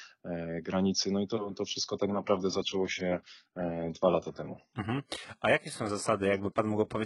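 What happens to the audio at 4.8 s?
At 4.8 s the clip is inside a stretch played from an adaptive stream at a lower bitrate, running from 1.92 s to the end. When the connection slowed, the player switched to a leaner encoding, and the sound points to a drop from about 96 kbit/s AAC to a 12 kbit/s HE-AAC version. Nothing sounds above 11.1 kHz, and the treble turns thin and synthetic as codec artefacts rise. Unlike a dropout, the switch is sudden but leaves no gap in the audio.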